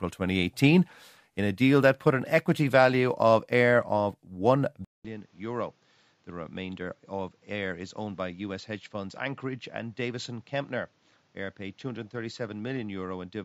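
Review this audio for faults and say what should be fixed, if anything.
At 4.85 s the speech drops out for 200 ms and returns duller and quieter, staying that way to the end. Nothing remains above 7.6 kHz, the level falls by roughly 10 dB, and a new background noise sits around 35 dB under the speech. The abrupt change in bandwidth, tone and noise points to an input switched to a poorer device, likely a fallback microphone or a headset call profile taking over mid-recording. Pin the recording input to a fixed device and disable automatic device switching for the duration of the session.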